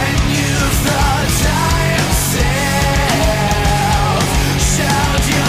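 No technical faults can be heard anywhere in the audio, and the signal holds steady throughout.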